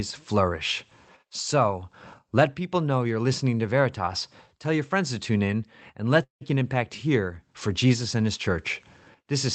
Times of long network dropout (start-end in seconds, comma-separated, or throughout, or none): 6.23-6.43